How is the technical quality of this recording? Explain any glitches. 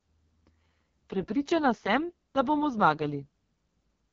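The quality's pretty rough. The whole clip has been through the AMR wideband (HD Voice) codec, and a heavily compressed setting at that. Throughout, the speech sounds raspy and gritty, which fits AMR-WB's lowest rate of around 6.6 kbit/s. That mode models the vocal tract and drives it with sparse pulses, so there's too little detail to rebuild the voice cleanly. The top band is just shaped noise, and nothing is left above about 7.3 kHz.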